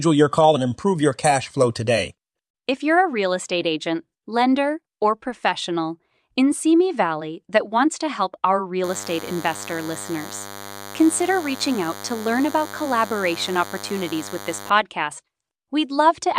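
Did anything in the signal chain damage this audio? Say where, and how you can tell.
Yes. At the analogue stage, a nearby DECT transmitter's 10 ms radio bursts were rectified in the audio circuitry, causing DECT cordless phone buzz: a thin, steady 100 Hz buzz rich in harmonics, roughly 15 dB under the speech, from 8.84 to 14.70 s, starting after "wants to help our".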